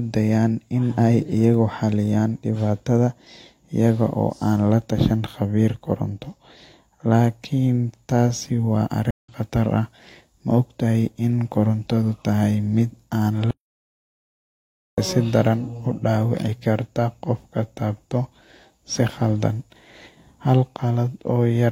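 At 9.11 s, just after "taasi wa", a stream reconnect breaks the speech: about 136 ms of silence, then a fresh decoder resumes the stream roughly 150 ms later, so a small piece is skipped. On a spectrogram this shows as a narrow blank column with a faded-in restart.

From 13.51 s to 14.98 s an audio dropout to silence removes about 1.47 s, likely from lost input while silence kept being written. The waveform goes flat with no room tone until the speech jumps back at "sidaran udawici karta qafka".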